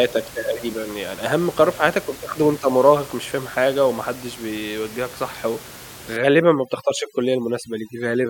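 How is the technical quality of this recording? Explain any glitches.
The recording is marred near the end by overdone noise removal. Room noise sits about 18 dB below the speech until then. From 6.17 s to 8.3 s, an over-aggressive noise reduction setting cuts frequency bands near the noise estimate, leaving a lowered background broken up into twinkling specks. Unlike codec artefacts, the effect follows the noise floor, not the bitrate.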